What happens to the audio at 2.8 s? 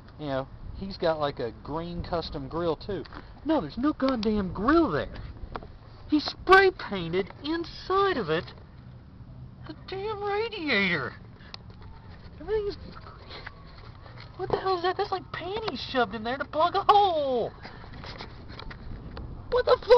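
Nothing goes wrong at 2.8 s; the audio plays through that moment intact, with no dropout, click or distortion.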